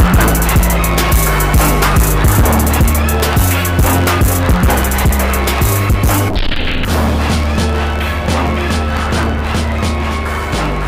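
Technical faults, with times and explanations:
throughout, block size mismatch (truncated): each block's tail gets dropped, giving a 91.9 Hz buzz and 1.07x speed at normal pitch, which fits 512-sample writes.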